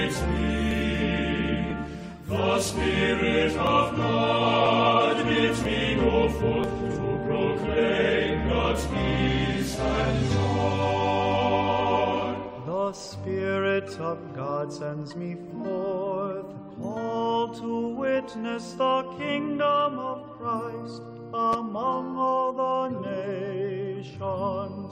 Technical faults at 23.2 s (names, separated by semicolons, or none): none